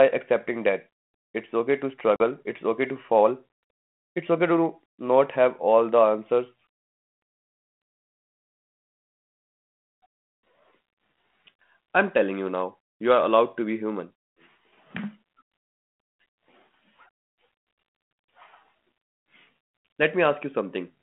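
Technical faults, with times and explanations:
2.16 to 2.22 s, packet loss on an ADPCM call: right after "that it's okay to", the sound drops into a hard-edged silent gap of about 40 ms, consistent with a couple of lost packets. When it resumes at "it's okay to fall", it comes back with a brief, slight roughness. The decoder's adaptive predictor and step size lost step with the sender's during the gap and take some tens of milliseconds to re-converge. The 32 kbit/s G.726 line, band-limited to 200 Hz to 3.4 kHz, otherwise carries only light coding grain.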